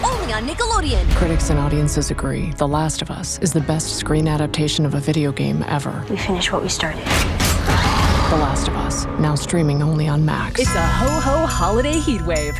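No technical fault can be heard anywhere in the audio, which holds steady and intact over its whole duration.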